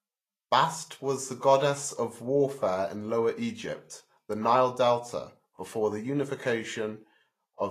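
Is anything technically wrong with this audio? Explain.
Yes. Throughout the speech, the audio carries plainly audible damage from what is likely Vorbis compression at a low setting, consistent with a bitrate around 30 kbps. The encoder models the spectrum as a smooth floor and spends too few bits on the detail above it, so the fine treble structure is replaced by noise of similar energy. Nothing remains above 14.2 kHz, the upper range sounds hissy and grainy, and consonant attacks are smeared.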